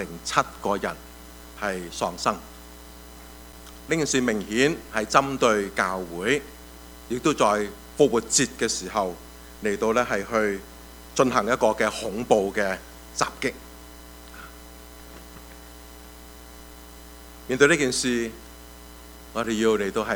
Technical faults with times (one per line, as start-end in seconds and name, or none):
3.53 block of digital silence
19.43 block of digital silence